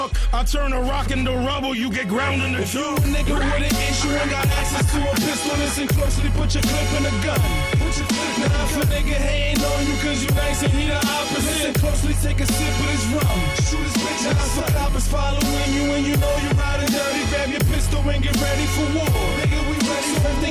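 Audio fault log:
Nothing stood out on listening.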